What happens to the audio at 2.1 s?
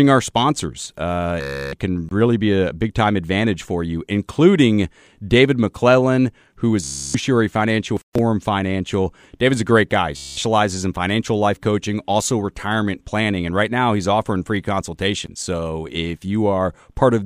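A block of digital silence cuts the speech from 2.09 to 2.11 s, just before "really be a big". The output buffer likely went unfilled, a 1024-sample block. The missing block makes a short hole.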